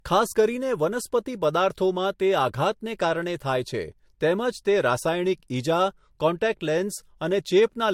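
Throughout the speech, nothing sounds above 16.5 kHz, and two distinct kinds of coding smear sit on top of each other, likely transcoding between lossy codecs, perhaps Vorbis then MP3, unlike single-pass compression.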